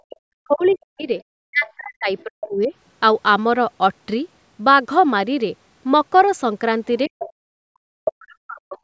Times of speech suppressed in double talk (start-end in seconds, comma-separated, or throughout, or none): 0.00-1.09, 1.43-2.72, 7.08-8.83